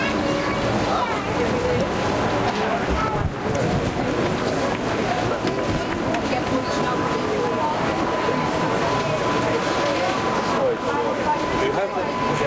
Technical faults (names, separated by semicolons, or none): gain pumping